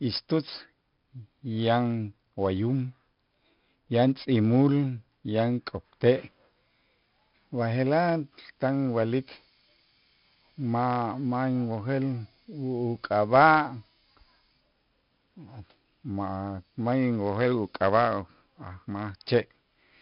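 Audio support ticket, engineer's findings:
4-bit ADPCM compression, throughout. Gritty hiss riding every loud syllable, smeared consonant attacks where step size lags. Nothing above 5.3 kHz, dull top end; fits a low sample rate near 11 kHz, roughly 44 kbps stream. Heavy codec damage.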